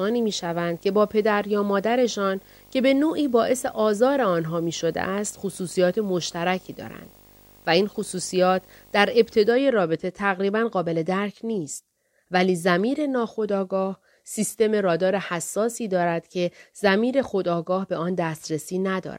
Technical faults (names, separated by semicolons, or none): video or display buzz